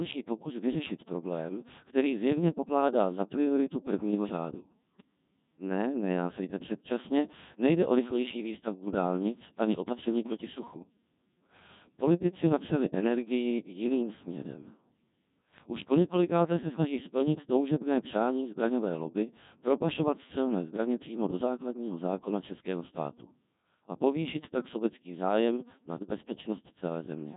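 Throughout, the speech carries the heavy, buzzy, robotic colour of the Codec 2 vocoder, consistent with its 1.6 kbit/s mode. Only pitch, voicing, energy and a coarse spectral envelope survive, and the decoder rebuilds the voice from sine waves, so the original waveform is gone.

At 4.90 s, just after "za prioritu prvního řádu", bit errors on digital voice radio corrupt about 0.14 s of audio. The error rate sounds like a few percent. Each corrupted frame gets wrong pitch, level and spectral parameters, so the synthetic voice lurches into a brief warbling, bleeping burst.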